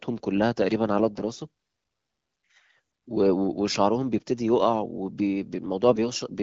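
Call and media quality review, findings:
AMR bit errors, 1.15 to 1.21 s: weak radio link flipping lightly protected AMR-WB bits while the core checksum still passes. Burst spans two 20 ms frames, error rate around 5 percent. Excitation pulses misplaced, gain and spectral values off. Sound turns briefly hoarse and gargly, pitch and level roughly held.

AMR bit errors, 5.89 to 5.99 s: same mechanism, longer burst fitting about five frames, error rate around 4 percent. Scratchy, gargled roughness over this span against the light, clear coding elsewhere.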